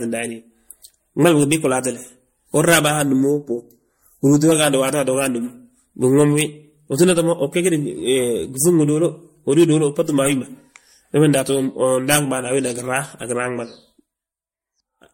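It's a speech clip, and the whole thing sounds swirly, smeared and hollow with nothing above 16.6 kHz, likely generation loss from several MP3 re-encodes at something like 64 kbit/s. From 3.02 to 4.52 s there's channel delay comb filtering: one side lags by a fraction of a millisecond, so the mono sum turns phasey with a first notch around 3 kHz.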